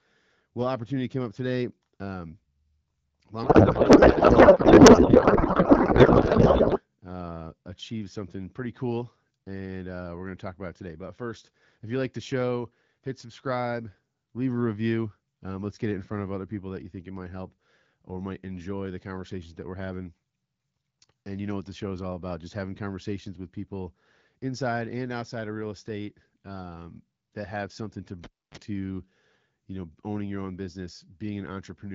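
From 3.43 s to 6.81 s the speech is replaced by garbled noise and warble that barely tracks the talker. This is a codec payload misread: the frames were packed in octet-aligned AMR form but decoded as bandwidth-efficient, so every field is read from the wrong bit position. The decoder still produces plausible-looking frames, just with nonsense parameters. Clean speech resumes with "uh achieved something pretty" once both ends agree on the packing.

At 28.24 s, right after "that have something to", there is a cable pulled and plugged in. A pop marks the disconnect, followed by about 286 ms of near silence. Then comes a 32 ms burst of 50 Hz mains buzz as only the plug tip makes contact and picks up hum. A second pop at 28.57 s marks full reconnection, and the signal returns through the AMR-WB wideband path.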